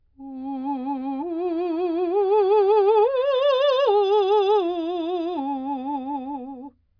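No technical faults can be heard anywhere in this music.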